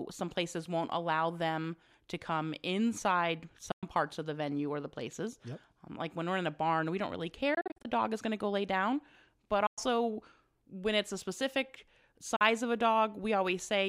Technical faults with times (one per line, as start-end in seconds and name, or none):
3.71-3.83 Bluetooth dropout
7.54-7.85 Bluetooth dropout
9.66-9.78 Bluetooth dropout
12.36-12.41 Bluetooth dropout